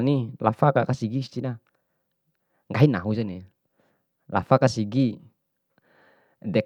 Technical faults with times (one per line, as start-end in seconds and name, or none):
2.77-2.85 corrupt frame decoded